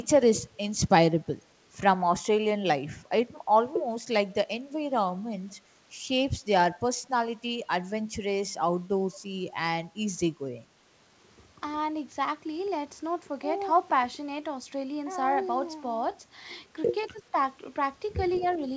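From 17.08 to 17.2 s the speech dips sharply, falling by roughly 25 dB for about a tenth of a second before recovering. This is speech suppressed in double talk: the echo canceller, likely confused by both sides talking at once, turned down the near talker along with the echo.

Between 18.32 and 18.38 s a faint, delayed copy of the voice surfaces, trailing the original by 191 ms and sitting roughly 25 dB below it. This is echo leak: the far end's canceller likely let some of its loudspeaker's sound through its microphone and sent it back.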